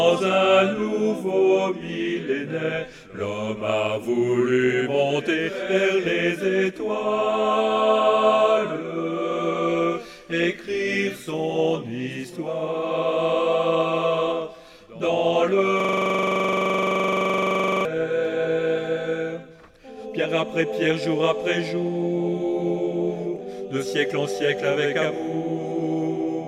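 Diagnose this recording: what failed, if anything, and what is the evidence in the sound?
A system hang loop at the driver or buffer stage runs from 15.80 to 17.85 s. The host froze while the converter kept replaying its ring buffer, so one 42.67 ms slice repeats about 48 times, which fits a 2048-sample buffer. It sounds like a rough buzz at 23.4 Hz. The waveform shows one identical block tiled end to end, and the spectrogram shows evenly spaced vertical stripes with a 23.4 Hz harmonic comb.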